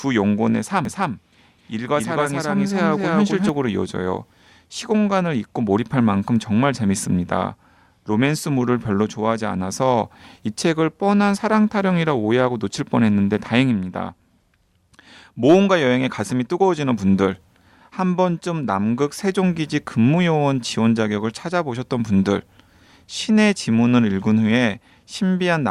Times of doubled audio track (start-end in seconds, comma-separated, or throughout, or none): 0.85-3.49